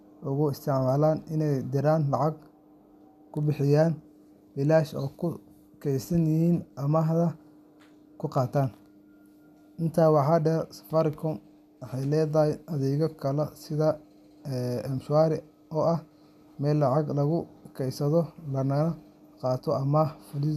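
Nothing stood out as a technical problem on listening to the speech recording.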